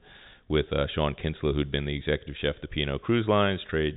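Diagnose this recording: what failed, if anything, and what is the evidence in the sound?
Nothing failed: the speech carries the ordinary G.711 telephone coding band limit, with nothing above 3.8 kHz, and no stage from wiring to playback shows a defect.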